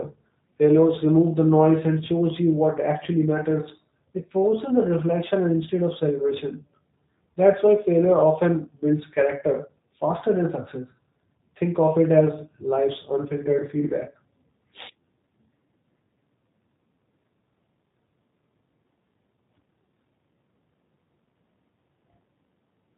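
From start to finish the speech sounds rough and faintly synthetic, with nothing above 3.8 kHz. This is plainly audible G.729 codec damage. The voice is rebuilt from a vocal tract filter, a pitch predictor and sparse pulses, which fits an 8 kbit/s VoIP stream.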